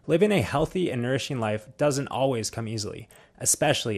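MP2 compression damage runs through the whole clip, from the first second to the last. The speech sounds dull and muffled, with a gurgling, granular roughness riding on it. That points to the likely cause, an MPEG Layer II encoder starved of bits, which fits a rate of about 80 kbps. Short of bits, it shuts off upper sub-bands, which flicker in and out, and coarsely quantises the bands left, leaving that watery grit.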